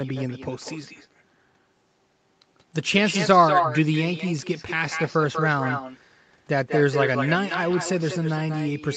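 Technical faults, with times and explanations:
Throughout: echo with no canceller. The far end plays the call over a loudspeaker, and its microphone sends that sound back with nothing to remove it. Each phrase returns about a fifth of a second later as a thinner copy only about 6 dB quieter.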